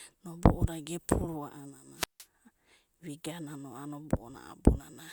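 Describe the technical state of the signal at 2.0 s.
At 2.0 s you're inside a wireless microphone squelch dropout, 1.95 to 2.26 s: the radio link fades, hiss swells, then the receiver mutes the speech for about 162 ms.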